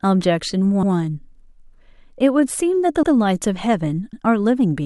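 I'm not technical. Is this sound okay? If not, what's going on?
No. The speech stutters at 0.83, 1.93, 3.03 and 4.13 seconds, a fault called overlapping chunks. The audio was handled in one-second pieces that overlap, so a tenth of a second repeats at each join. Unlike a dropout, nothing goes missing; a bit is heard twice.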